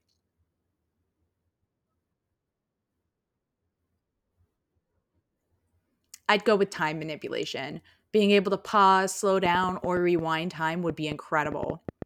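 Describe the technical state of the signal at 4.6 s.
At 4.6 s the speech signal is intact, with no dropout, clipping, glitch or other technical fault.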